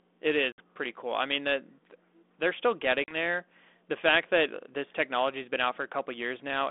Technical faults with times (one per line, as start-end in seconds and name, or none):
0.52-0.62 packet loss on an ADPCM call
3.04-3.16 packet loss on an ADPCM call